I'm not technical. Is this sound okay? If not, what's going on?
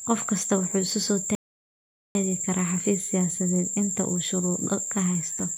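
No. At 1.35 seconds the speech stops dead and goes silent until 2.15 seconds. Then it picks up exactly where it left off. This is a rebuffering stall. The player ran out of downloaded audio and had to wait for more to arrive. Nothing is missing or skipped. The stall just inserts a pause of about 0.8 seconds that was never part of the recording.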